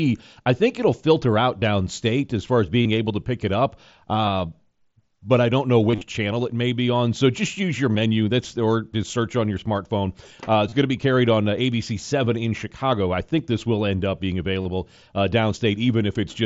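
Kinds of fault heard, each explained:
Concealed Bluetooth headset packet loss: lost headset speech packets were patched by repeating the best-matching stretch of waveform, giving brief buzzy held patches, densest around 6 s. Waveforms show copied, repeating cycles at steady level. Spectrograms show smeared, flat harmonic bands ending in a small seam.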